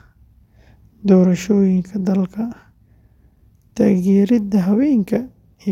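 No technical faults can be heard in this speech recording.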